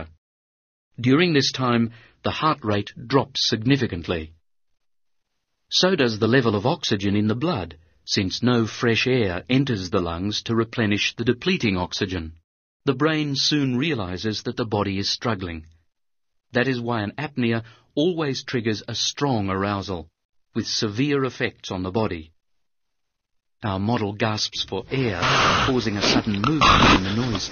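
From the start to 4.0 s the clip plays as an adaptive stream starting at a low bitrate. The player began on a reduced-quality version to get going fast, then switched up once it had measured the connection. Until the switch, nothing sounds above 6.9 kHz, so the top end is dull and compression artefacts are stronger, which fits a 32 kbit/s MP3. At 4.0 s the quality jumps abruptly, consistent with a 128 kbit/s stream, with no gap.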